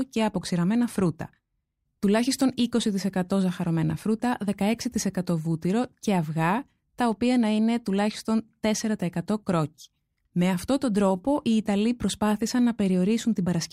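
Speech recording with no audible technical faults.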